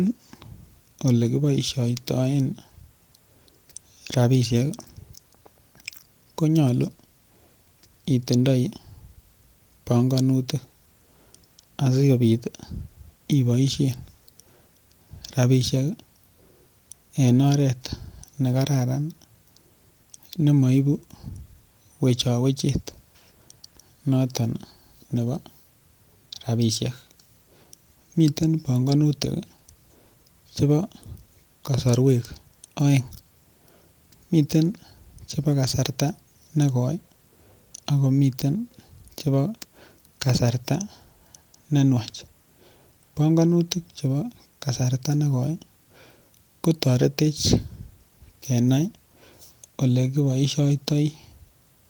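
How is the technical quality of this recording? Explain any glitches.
The technical quality of this recording is good, with no glitches to explain.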